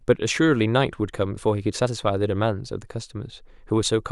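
No technical faults can be heard in this recording.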